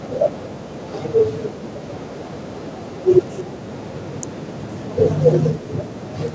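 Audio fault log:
0.00–0.08 s, echo leak: The far end's echo canceller likely let part of its loudspeaker pickup through, so a faint delayed copy of the speech arrives about 326 ms late and around 20 dB below the talker. It is a brief scrap at the very start.
3.43–3.51 s and 5.35–5.94 s, speech suppressed in double talk: With both sides talking at once, the echo canceller likely mistook the talker for echo and turned the speech down. The first dip is short and shallow, about 15 dB; the second gouges roughly half a second, close to 40 dB, nearly silencing it.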